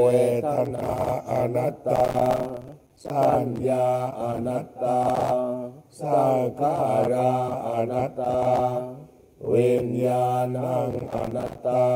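From 1.96 to 3.10 s the audio breaks into processor overload crackle: the processor is missing its deadlines for successive short buffers, around 5 ms each, and every miss drops a hard-edged slice of silence into the stream. Dozens of these gaps in quick succession are heard as a gritty, tearing crackle over the sound. A shorter burst of the same overload returns from 11.12 to 11.59 s, with fewer dropouts.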